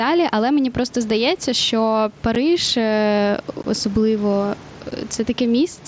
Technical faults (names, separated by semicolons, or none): gain pumping; unconcealed Bluetooth headset packet loss